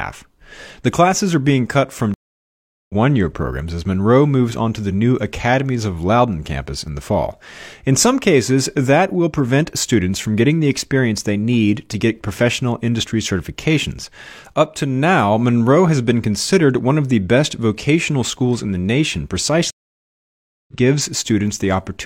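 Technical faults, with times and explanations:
2.14–2.94 s, stream reconnect: the connection dropped and the player rebuilt its decoder mid-stream, leaving about 0.75 s of silence after "are being cut from"; it resumes at "year programs as" roughly 0.7 s further on, so that stretch of audio is simply missing.
19.71–20.73 s, stream reconnect: another broken connection forced a fresh decoder start, giving almost a full second of silence after "schools in the nation", and playback picks up about a second later in the live stream, skipping what fell in between.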